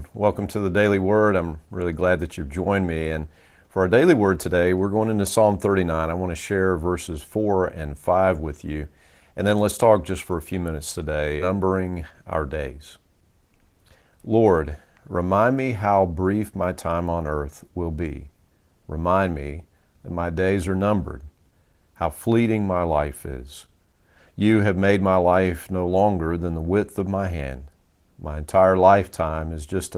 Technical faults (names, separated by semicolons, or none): skip ahead; jitter buffer speed-up